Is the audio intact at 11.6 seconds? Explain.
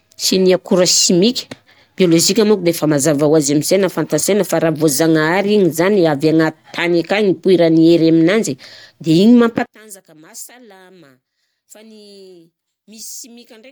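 No. From 9.66 s to the end of the clip at 13.71 s, the speech falls by about 25 dB and turns faint. The likely cause is one channel inverted: with one stereo channel's polarity reversed, the centred voice cancels on mono playback, leaving only the small difference between channels. A plain dropout or gain cut would leave silence or a quieter but full sound, not this faint residue.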